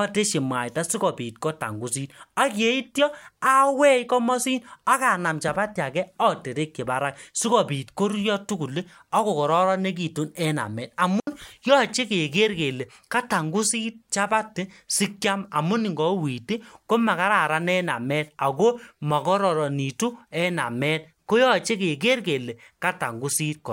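Speech with a digital wireless dropout at 11.20–11.27 s, between "kokaroronegitu en amet" and "yoche keger kele": the receiver mutes for about 73 ms, leaving a clean silent hole without noise bursts.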